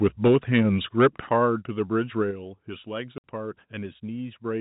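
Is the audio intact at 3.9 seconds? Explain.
Yes, the audio is intact at 3.9 seconds, with the speech coming through the narrowband G.711 telephone path as it should.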